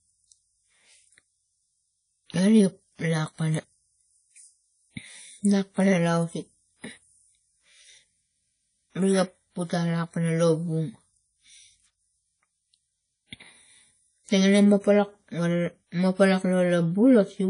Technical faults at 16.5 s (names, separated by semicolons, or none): WMA compression